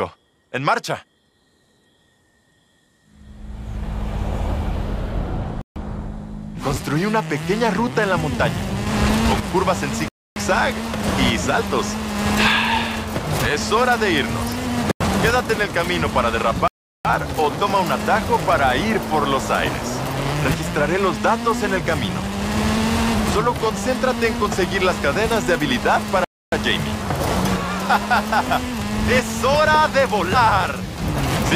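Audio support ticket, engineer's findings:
Block of digital silence at 5.61, 10.08, 14.91, 16.68 and 26.24 s, gaps 93 to 372 ms. Output buffer likely left unfilled; two gaps are 4096 and 16384 samples.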